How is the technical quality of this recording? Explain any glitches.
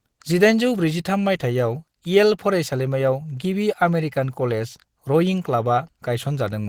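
The technical quality is clearly degraded. Opus compression runs through the whole recording, most likely from a low-rate encode. The speech sounds hoarse and grainy rather than swirly, because the codec fills starved bands with noise instead of leaving holes. The muffled, rough texture points to Opus's hybrid speech mode at a rate around 16 kbps.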